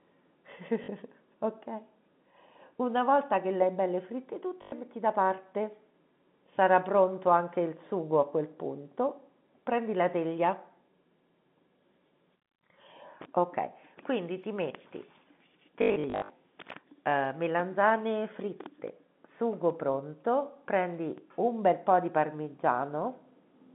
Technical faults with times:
0.84-0.88 packet loss with last packet repeated
4.62-4.72 packet loss with last packet repeated
15.82-16.30 packet loss with last packet repeated

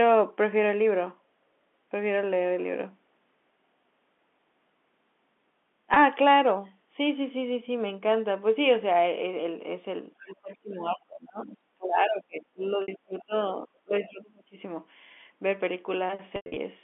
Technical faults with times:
5.94-5.96 packet loss with pitch repetition
6.66-6.70 other side's voice leaking through
10.18-13.33 speech suppressed in double talk
10.96-11.04 other side's voice leaking through
11.39-11.58 other side's voice leaking through
12.62-12.70 other side's voice leaking through
12.82-12.88 packet loss with pitch repetition
13.18-13.47 other side's voice leaking through
13.66-14.56 speech suppressed in double talk
14.02-14.22 other side's voice leaking through
16.36-16.56 packet loss with pitch repetition

